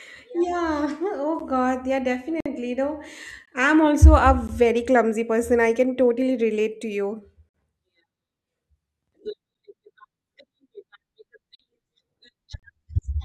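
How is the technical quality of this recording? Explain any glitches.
The recording has a gap between stream segments, occurring eight times. Short holes of silence appear at 1.39, 2.40 to 2.46, 3.46 (just before "I'm also a"), 4.48, 7.49 to 7.54 (after "totally relate to you"), 9.54, 11.55 to 11.59 and 12.59 to 12.63 s. Their timing fits one-second segments. Adjacent segments' timestamps don't meet, and the player fills the gap with silence. Each dropout lasts about 9 to 53 ms and has hard edges. No sound is lost.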